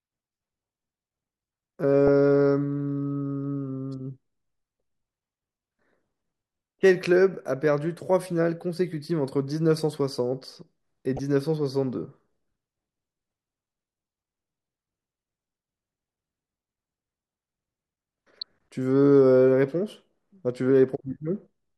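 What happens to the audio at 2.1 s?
A corrupt frame decoded at 2.07 s. Flipped bits in one compressed frame were played anyway, so misread codes and gains put energy at wrong frequencies. It is heard as a brief chirp, squeak, blip or burst of noise peaking around -10 dBFS, short enough to fit a single damaged frame.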